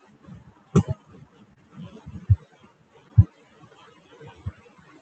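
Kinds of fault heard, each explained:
Short concealed packet loss: twice, about 20 ms of speech never arrived and was patched by extending the preceding sound, seen as brief, smeared, unnaturally steady spectrogram patches.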